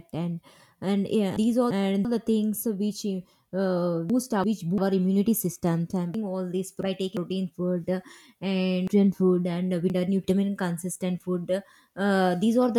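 At 1.37–2.05 s, 4.10–4.78 s, 6.14–7.17 s and 8.88–10.24 s, the speech has chunks out of order: a 0.34 s block plays one, one, two and three chunks late. Each is a jumbled stretch, but unlike a dropout or repeat, nothing is missing or doubled.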